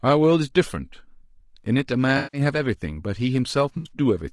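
Throughout, the speech sounds rough and grainy, with noise filling the gaps between harmonics and a thin, synthetic-sounding top band. This is likely low-delay AAC compression (AAC-ELD), whose short frames resolve pitch harmonics poorly. The damage is plainly audible and fits a bitrate around 32 kbps.

From 2.17 to 2.41 s, and again from 3.77 to 3.91 s, the sound smears into a noisy, phasey patch. This is AAC frame loss with concealment. About 160 ms and then 80 ms of data went missing, which fits eight and then four lost frames, and the decoder rebuilt each gap from the last good spectrum.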